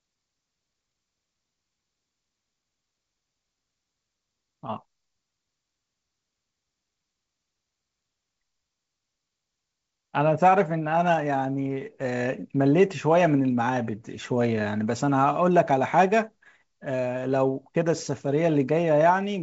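A speech clip over G.722 wideband telephone coding with nothing technically wrong with it.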